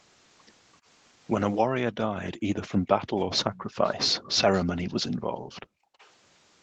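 At 2.24 to 2.31 s a faint, delayed copy of the speech appears about 0.33 s behind the original. This is echo leak: the far side was likely playing the call on a loudspeaker, and its echo canceller left some of what the microphone picked up, which was sent back. It returns at 3.36 to 3.63 s and 3.86 to 3.94 s with a delay of about 0.34 s. The first two scraps sit well below the speech, and the third is noticeably stronger.

From 5.16 to 5.99 s the background is gated by the echo canceller. While the loudspeaker was playing, the canceller pulled the microphone down hard, by about 38 dB at the deepest point. The room sound dips or vanishes for roughly 0.7 s in total, then comes back when the canceller releases.

At 5.99 to 6.10 s a final, very quiet echo leak follows with a 0.34 s delay. Throughout, nothing is present above 8 kHz, which fits the wideband call path.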